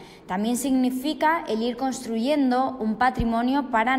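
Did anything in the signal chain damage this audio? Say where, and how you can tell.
No, nothing along the signal chain has left an audible mark on this audio: there are no dropouts, no distortion, no level jumps and no timing irregularities anywhere in it.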